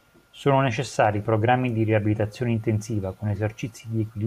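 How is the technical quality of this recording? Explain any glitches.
No glitches or technical faults can be heard anywhere in this speech recording.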